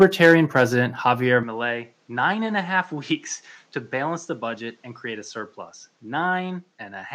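Harsh, crackling edges ride on the loudest moments of this speech from 0.01 to 0.62 s, where peaks overshoot by about 4 dB and a small share of samples are flattened. This is likely microphone overload, with input volume set too high for the converter. The level also drops suddenly twice, by about 2 dB at 0.03 s and about 4 dB at 1.02 s, each a single abrupt step rather than a fade. The likely cause is the microphone volume being stepped down automatically after the distorted peaks. From 1.43 s to the end the sound turns duller and somewhat quieter, with a faint new noise floor well below the speech, and no gap at the change. This points to the input having likely switched to a poorer device mid-recording.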